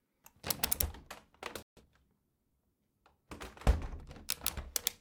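At 1.63 s the sound cuts off abruptly and the output stays silent until 1.77 s, a gap of about 143 ms. This is a playback stall, most likely the player running short of data or its thread being held up. A dropout loses a piece of the audio, but here the output is held back and then resumes. It is delayed.

From 1.77 to 1.91 s comes time-compressed catch-up, as the player works off the backlog the stall created. It removes small slices and cross-fades the remaining pieces, so the sound plays at twice its normal rate for about 140 ms. Unlike a simple speed-up, the pitch stays where it was. The giveaway is a brief hurried texture where the splices join.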